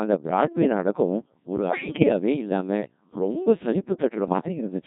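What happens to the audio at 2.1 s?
At 2.1 s a burst of bit errors on digital voice radio is just ending. It runs from 1.68 s to 2.10 s, between "அந்த பிராட்வே நாடகம் ஒரு" and "இல்லாம ரொம்ப". Roughly one bit in ten arrives flipped. In a vocoder this sparse, each bit sets the pitch, level, voicing or spectral shape of a whole frame, so the synthetic voice lurches in pitch and loudness and dissolves into warbles and robotic gibberish. The 0.41 s span fits about nine corrupted frames.

Underneath, the whole clip passes through the Codec 2 vocoder, and the heavy buzz fits its 1.6 kbit/s mode. The decoder keeps no waveform. It only receives pitch, voicing, energy and a coarse spectral envelope, then rebuilds the speech from summed sine waves. That gives the voice a flat, metallic, robotic timbre, and at 2.1 s the speech that resumes still carries this sound.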